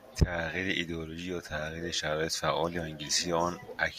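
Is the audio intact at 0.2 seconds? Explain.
No. From 0.19 to 0.24 s the speech crackles harshly, its peaks flattened: microphone overload, likely input gain about 7 dB beyond the converter's limit.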